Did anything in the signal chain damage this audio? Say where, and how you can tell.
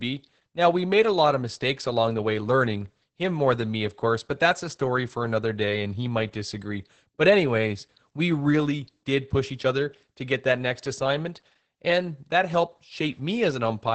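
Yes: the codec stage. Opus voice compression in SILK mode cuts everything above 8.5 kHz and coarsely codes the excitation throughout, so the speech sounds muffled, hoarse and slightly robotic, consistent with about 10 kbps.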